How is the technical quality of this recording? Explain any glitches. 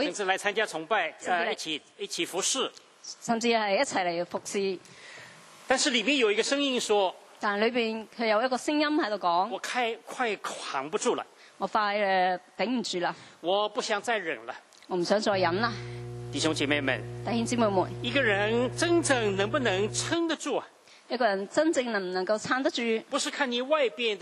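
The recording has one clear fault: mains hum. From 15.3 to 20.2 s, a steady low 60 Hz tone sits under the sound. It is strong, about 10 dB below the signal. Power-line current leaked into the signal path, likely through a ground loop or nearby transformer.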